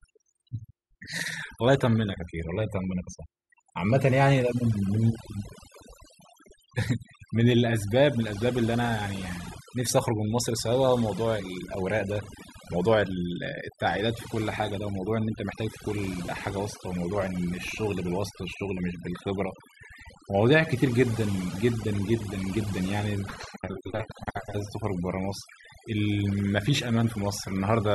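Speech runs through overdone noise removal for its whole length: the background drops and breaks up into twinkling specks. A spectrogram shows scattered isolated time-frequency blobs in the gaps and holes eaten out of the quieter voice harmonics.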